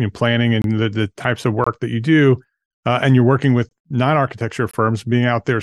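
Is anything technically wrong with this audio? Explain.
Yes, the speech has a gap between chunks: the stream arrives in one-second pieces, and about 23 ms of silence is inserted at each join, which fits a 1024-sample block at 44.1 kHz. Nothing is dropped, but short holes interrupt the speech at 0.62–0.64, 1.64–1.67, 2.67–2.69, 3.69–3.71 and 4.71–4.73 s.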